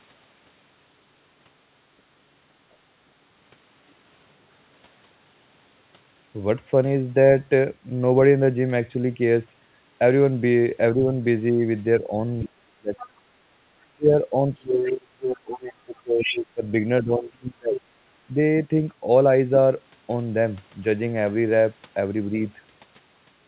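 Speech suppressed in double talk runs from 10.92 to 13.24 s and again from 13.89 to 18.37 s. The talker's speech dips by as much as about 30 dB, in pieces adding up to around a second in the first stretch and around three seconds in the second. The likely cause is the echo canceller failing to tell the talker from the loudspeaker signal while both sides spoke, so it turned everything down. Within this band-limited audio, where nothing reaches above 4 kHz, as with a narrowband telephone codec, the gaps sound like sudden holes in the speech.

The other side's voice leaking through appears in short scraps at 12.98 to 13.07 s and 14.55 to 14.66 s, about 20 dB below the speech. From 15.97 to 16.36 s it is much stronger, only about 5 dB down. Each time it is likely a second voice that the canceller did not fully remove from the microphone signal.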